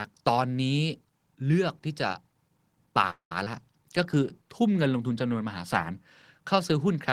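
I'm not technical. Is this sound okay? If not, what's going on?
No. There are three short network faults in this speech, all between 3 and 5 seconds.

At 3.10 to 3.32 s there is a call audio freeze. The speech stops. The last sound drags on as a fading buzz or hiss, then goes quiet for about a tenth of a second. Then it carries on from where it stopped. Nothing is lost, but a gap is added. Data was likely held up on its way.

At 3.45 s there is a skip ahead. The speech jumps forward with almost no gap. About a tenth of a second of sound is missing. The two sides are joined nearly directly.

From 3.83 to 4.93 s there is a jitter buffer slow-down. The receiver repeated tiny slices of sound to build up a reserve. Speech plays at about 92 percent speed, but the pitch stays the same. Sounds seem slightly drawn out.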